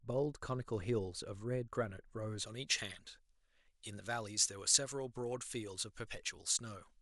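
Speech clip. From 2.46 s to the end, pre-emphasis was left on: the treble boost was never undone, leaving highs about 11 dB up at 10 kHz, so the sound turns thin, bright and sibilant.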